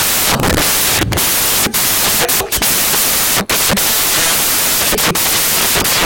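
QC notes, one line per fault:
Throughout: samples built from the wrong bytes. Loud white noise runs through the speech, because misassembled bytes make the noisy low bits dominate each value.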